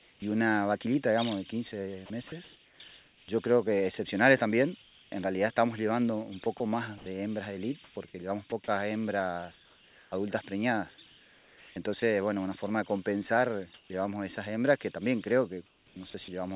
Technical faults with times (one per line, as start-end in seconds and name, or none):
0.00-0.22 comfort noise in place of the background
2.06-3.28 sound chopped by the voice detector
4.82-5.12 comfort noise in place of the background
5.10-5.12 onset clipped by the voice detector
6.44-12.02 sound chopped by the voice detector
13.74-13.90 comfort noise in place of the background
15.66-16.28 sound chopped by the voice detector